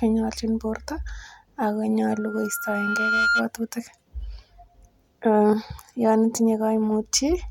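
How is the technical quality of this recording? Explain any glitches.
The recording has one clear fault, a loudspeaker feedback squeal. From 2.12 to 3.48 s, a tone near 1.4 kHz swells over about a second. It ends up roughly 5 dB above the speech. A microphone is picking up its own loudspeaker. At that frequency the loop gain passes one, so the tone keeps feeding itself and grows into a steady, piercing squeal.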